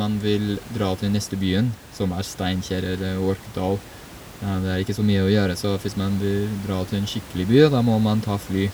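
Nothing in this bit of speech points to a technical problem, and the only thing in the background is the room's own noise, sitting about 19 dB under the voice as part of the recording itself.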